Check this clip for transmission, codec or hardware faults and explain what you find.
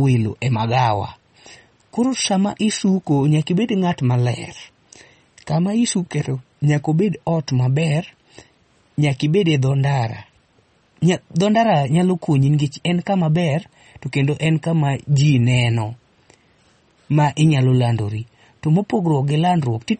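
The speech has a watery, swirling quality from start to finish, with s sounds turning metallic and chirpy, consonant attacks smeared, and nothing at all above 8.4 kHz, so the top end sounds dull and boxed in. This is MP3 compression, likely at a low bitrate around 32 kbps. Starved of bits, the encoder cuts the treble at a fixed point and drops weaker frequency lines that flicker in and out between frames, producing the swirl.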